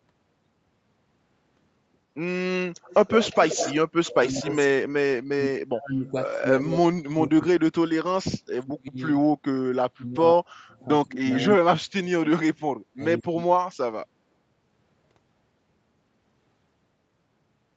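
From 2.86 to 4.29 s a faint second copy of the speech trails the original by about 132 ms, roughly 10 dB below it. This is an echo leak. The likely cause is a far end on a loudspeaker whose echo canceller left part of the returned signal in place. Unlike a room reflection, the copy sits at one fixed delay. It returns briefly at 6.71 to 6.76 s and at 11.40 to 11.53 s with the same spacing.

Overlapping the first leak, from 4.12 to 6.71 s, the speech repeatedly sinks, at its deepest by around 35 dB, for about two seconds in total. This is speech suppressed in double talk, likely from the echo canceller treating the near talker as echo while both sides spoke at once. The same holes recur at 7.08 to 7.72, 8.12 to 9.00, 9.84 to 12.48 and 12.92 to 13.50 s. What separates this from a network dropout is that only the talker on the loudspeaker side is turned down, in uneven pieces. These dips also take energy out of the speech, where the leak adds a second copy. 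Through all of it the call path's 8 kHz bandwidth limit stays constant.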